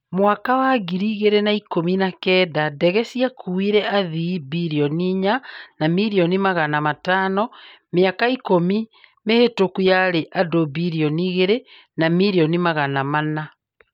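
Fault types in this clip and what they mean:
No faults heard in the speech; nothing to list.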